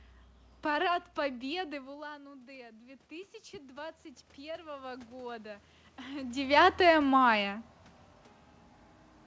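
A speech recording in which, from 1.23 s to 6.73 s, the voice and the room noise behind it swell together, climbing steadily over about five and a half seconds. That is automatic gain rising. Around 1.5 s the talker moves away and the level at the microphone drops by about 16 dB, so the gain control slowly adds about 10 dB to compensate, lifting the background along with the voice, until the talker moves again near 6 s. The call path through the G.722 codec leaves nothing above 8 kHz.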